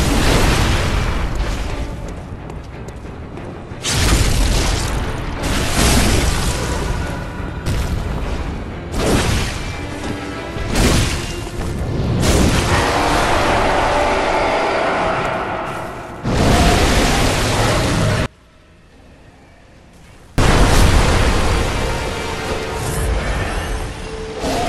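From 18.26 to 20.38 s the sound collapses. The level drops by about 30 dB, and what remains is faint. Centred material, background included, nearly disappears. The likely cause is one channel inverted. With one stereo side in reversed polarity, anything shared by both channels cancels when they are summed to mono. Only the difference between the two sides survives, which is why the audio sounds faint until it recovers at 20.38 s.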